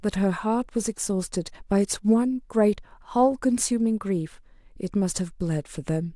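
No technical faults can be heard anywhere in this speech recording. There is nothing to place on the timeline, so no times or values apply.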